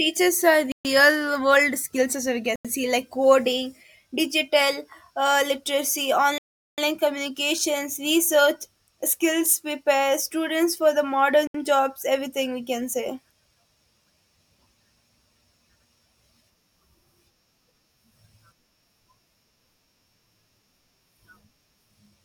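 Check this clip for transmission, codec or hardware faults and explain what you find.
The clip has one kind of fault, repeated four times in this speech recording.

Bluetooth stall, at 0.72 to 0.85 s, 2.56 to 2.65 s, 6.38 to 6.78 s and 11.47 to 11.55 s: the speech drops to silence for about 130, 91, 398 and 72 ms, then carries on. The likely cause is radio interference delaying packets so the headphones' buffer emptied and playback halted until retransmissions caught up. The longest gap is near 6.4 s.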